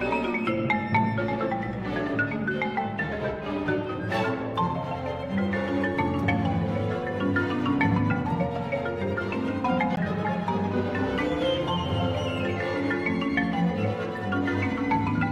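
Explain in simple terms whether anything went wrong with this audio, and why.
Something did go wrong: there's a CD skip at about 9.96 s. You hear a tiny tick and a split-second dropout, then the sound carries on from a slightly different spot, because a bump or a flaw on the disc knocked the laser onto another turn of the spiral.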